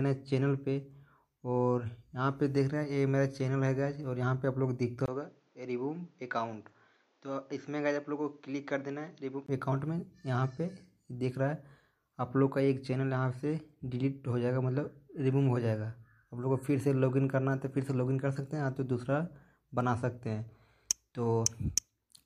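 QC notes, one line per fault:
5.06–9.48 s, input switched to a poorer device: likely a narrower-band microphone; sound dulls and quietens slightly, spectrogram empty above 7.6 kHz, 20 ms waveform gap at the switch.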